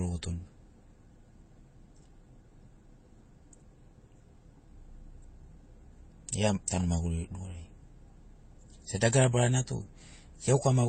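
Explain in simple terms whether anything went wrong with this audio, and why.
Something did go wrong, and it runs through the whole clip: nothing comes through above about 8.7 kHz, and two different kinds of compression smearing sit on top of each other. That's the sound of transcoding between lossy codecs, likely an MP3 re-encoded as HE-AAC.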